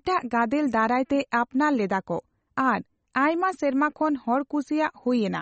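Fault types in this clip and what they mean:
MP3 compression: Throughout this speech, nothing comes through above 8.4 kHz, and the coding damage is easy to hear. The likely cause is an MP3 encoder working with too few bits, which fits a low rate around 32 kbps. With so little to spend, it drops the top end entirely and discards the quieter spectral detail it judges you won't miss, leaving the speech dull and audibly processed.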